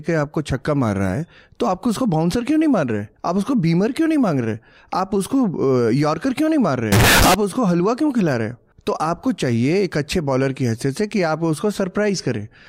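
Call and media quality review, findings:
Float read as integer, 6.92–7.34 s: 32-bit float samples likely decoded as 32-bit integer. Sudden loud, harsh, near-square burst, background noise as loud as speech, pitch still traceable.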